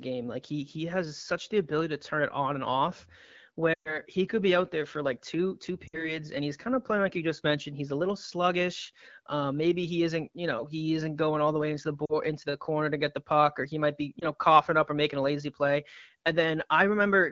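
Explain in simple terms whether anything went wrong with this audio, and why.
The speech briefly stumbles four times. It smears and fades at 3.73 to 3.99 s, dips again at 5.87 to 6.19 s, and gives shorter warbles at 12.05 to 12.16 s and 14.19 to 14.26 s. These are lost AMR speech frames. Radio errors corrupted small pieces of the call on its HD Voice (AMR wideband) link, so the phone filled each gap by stretching the last good sound while letting it fade.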